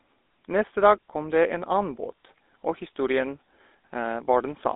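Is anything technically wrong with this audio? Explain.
Yes, two faults are audible. Throughout the clip, the speech carries GSM full-rate codec damage. The encoder models the vocal tract and excites it with sparse regular pulses, which fits 13 kbps full-rate coding. Speech is band-limited to roughly 250 Hz to 3.7 kHz, with a plainly audible buzzy, gravelly roughness.

From 2.16 to 2.18 s, just before "og historien", there are lost GSM frames. The decoder covered a 20 ms gap, consistent with one missing frame, by repeating the previous frame's parameters, producing a brief rough, metallic ring.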